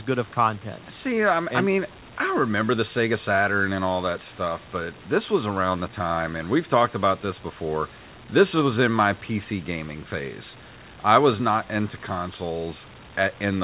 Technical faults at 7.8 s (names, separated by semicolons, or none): none